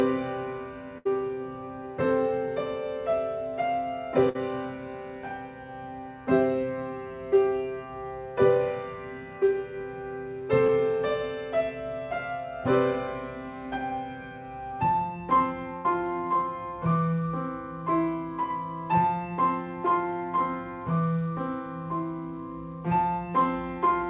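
A burst of packet loss hits at 0.98 to 1.07 s, and again at 4.29 to 4.37 s and 15.76 to 15.87 s. Each gap is filled by continuing the last sound, fading away. Then about 60 to 80 ms of audio is simply missing. At 10.67 to 10.70 s, a short concealed packet loss leaves a brief smear of about 20 ms. Through the narrowband call codec, nothing is heard above 4 kHz.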